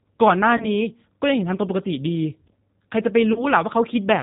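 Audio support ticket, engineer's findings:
Rough, slightly synthetic speech throughout; top end missing, nothing above 4 kHz. Probable component: G.729 codec, G.729A variant, sound consistent with an 8 kbit/s stream. Mechanism: speech is rebuilt from a vocal tract filter, pitch predictor and sparse pulses per 10 ms frame, so fine detail is lost. Codec damage plainly audible across the clip.

Buzzy or noisy, smeared stretch fading out at 0.57 to 0.69 s, and again at 3.33 to 3.46 s. Probable component: VoIP packet loss concealed by the speech codec; each gap fits one lost 30 ms packet. Mechanism: decoder extrapolates last pitch and filter with falling gain. Since each frame builds on the previous one, speech stays weak or distorted past the lost audio, to about 120 to 130 ms total.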